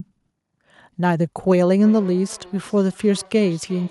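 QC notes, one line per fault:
1.83–3.90 s, feedback echo between two devices: the speech returns as a faint repeat roughly every 400 ms, peaking about 24 dB below the direct sound, thin and ringing. A second device in the same room is replaying this microphone's signal through its speaker, and the microphone picks that playback up again. Each echo canceller removes only its own device's output, so this loop passes through uncancelled and comes back at a fixed delay.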